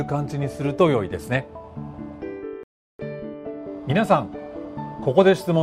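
At 2.63 s the sound stops dead and stays silent until 2.99 s, a rebuffering stall that adds 0.36 s to the running time. The player exhausted its downloaded audio and paused until more data arrived, then picked up at exactly the point where it left off, so nothing is skipped. On a waveform this shows as a flat line between two otherwise continuous stretches; a spectrogram shows a clean vertical blank band across all frequencies.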